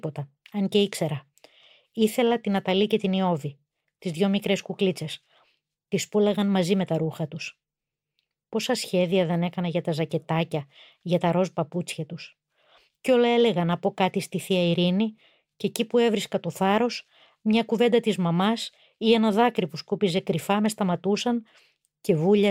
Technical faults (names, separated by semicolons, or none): none